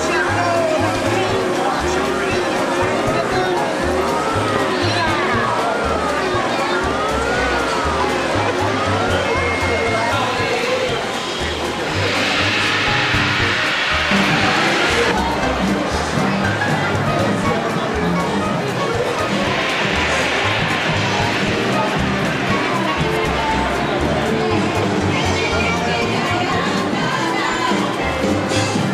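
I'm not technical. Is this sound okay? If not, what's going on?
No. There are two loud pops, at 4.56 to 4.58 s and at 10.01 to 10.03 s, the first one stronger. Each is a sudden electrical jolt, likely from a plug, switch or static, added on top of the sound, which continues underneath.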